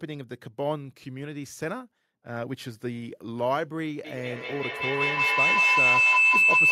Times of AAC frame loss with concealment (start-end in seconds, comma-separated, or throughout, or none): none